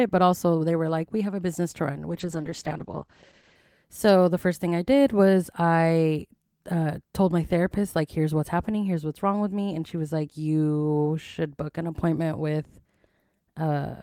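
At 2.11 s a call bitrate drop begins. The encoder falls to a much lower rate, which fits a move from 32 to 10 kbps. Bandwidth shrinks from 20 kHz to 8 kHz, so the speech turns muffled and coarse. It recovers by 3.63 s.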